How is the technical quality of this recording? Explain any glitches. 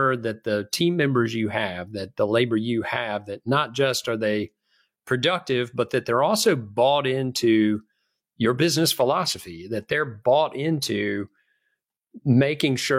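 No technical faults are audible.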